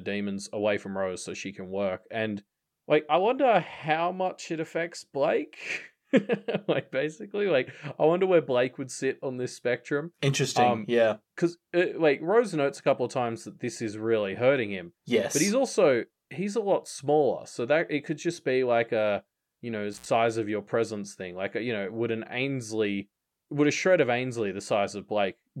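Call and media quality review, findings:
Intermittent contact, 19.93 to 20.06 s, after "like a you know", before "of your presence thing". Audio drops out for about 66 ms, crackle at both edges, faint hiss during the gap. Probable component: loose cable or plug briefly opening the line.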